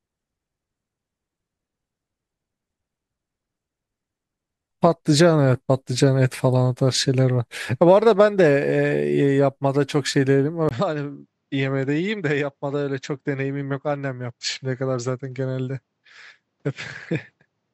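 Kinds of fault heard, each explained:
Input switched to a poorer device: at 10.69 s, after a 20 ms gap, the speech loses everything above 7.8 kHz, drops a few decibels and gains a faint new background noise, likely a microphone change. Unlike simple filtering, tone, level and noise all shift together.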